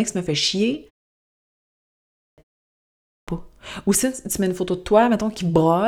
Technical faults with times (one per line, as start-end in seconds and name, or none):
2.02-2.38 clipped start after a pause
2.89-3.28 clipped start after a pause